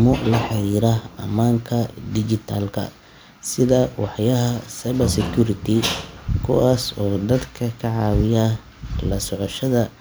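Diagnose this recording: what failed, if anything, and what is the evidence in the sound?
Nothing in the recording points to a failure at any stage of the chain, and the speech signal arrives intact and continuous throughout.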